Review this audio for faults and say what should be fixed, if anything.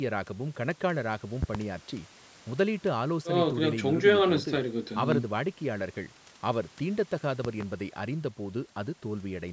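Loud pops occur at 1.43–1.59 s (a double pop), 5.12–5.16 s (single) and 7.45–7.64 s (double), peaking roughly 15–20 dB above the speech, which continues underneath. The likely cause is a voltage transient from a connector, switch, static or driver glitch. Secure connections and avoid switching during recording.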